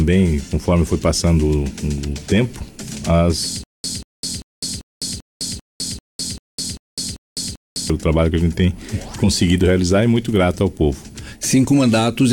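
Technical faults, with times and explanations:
3.64 to 7.90 s, stutter with silent gaps: the same 187 ms burst repeats 11 times, every 392 ms, with 205 ms of digital silence between. The cause is likely a stalled stream replaying its last fragment at each retry, so that stretch's audio is lost.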